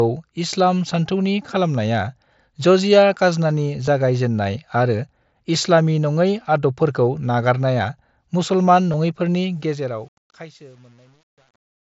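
Speech over a Bluetooth headset link using the mSBC wideband codec, where two short bursts of headset packets were lost on the way to the phone and the receiver bridged each gap with a copied stretch of recent waveform. This concealed Bluetooth headset packet loss covers about 15 ms each time, which fits two lost frames, at 3.86 s, between "जजिया काजनानि" and "जागाय जेननाय आरो इस्लामी", and again at 8.92 s. The fade-out that starts around 9.5 s and ends at 11.9 s is applied with too little word length and no dither, which points to roughly 9-bit resolution. This truncation distortion on a fade makes the waveform collapse into coarse steps as the level drops. From about 9.98 s to the end, the tail turns gritty instead of thinning away cleanly.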